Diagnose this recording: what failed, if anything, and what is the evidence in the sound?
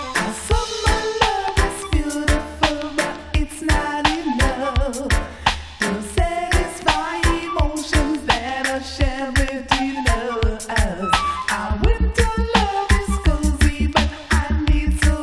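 Nothing stood out on listening that would point to a failure at any stage of the chain.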